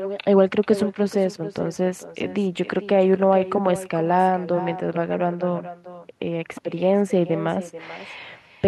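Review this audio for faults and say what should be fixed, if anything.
Echo with no canceller runs throughout the speech, with every phrase followed roughly 0.4 s later by a fainter copy about 13 dB below the direct sound. That copy is the talker's own voice returning: the far end plays the call through a loudspeaker, its microphone captures it, and nothing subtracts it before it travels back over the network. This gives the repeat its thin quality. To prevent it, enable acoustic echo cancellation at the far end, or have that participant use a headset instead of a loudspeaker.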